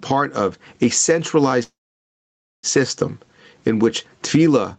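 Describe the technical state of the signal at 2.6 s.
At 2.6 s the signal sits inside a call audio freeze running from 1.63 to 2.66 s. The jitter buffer likely ran dry: the last sound continues briefly as a fading buzz or hiss, then about 0.9 s of near-silence until the audio resumes at "system in which tefillah", with nothing lost. On the waveform this is a near-flat line; the spectrogram shows an empty band.

Gain pumping runs throughout, likely from a fast limiter acting on a heavily overdriven input. Level swings of roughly 15 dB bring loud and soft parts closer in level and squash the sound.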